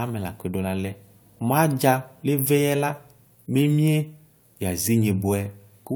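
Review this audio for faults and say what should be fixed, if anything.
Nothing needs fixing, as the speech signal shows no technical faults at any point in the recording.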